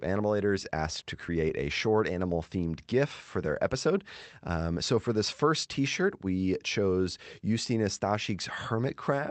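At 0.63 s the speech makes a skip ahead. About a second of audio is dropped, and the two sides join directly with no gap. From 0.75 to 2.12 s a jitter buffer speed-up follows. Pitch-period pieces are trimmed, removing roughly 150 ms, so the speech runs at 109% and sounds hurried. Throughout, the call codec's coding noise and a top end stopping near 8 kHz point to Opus at a modest bitrate.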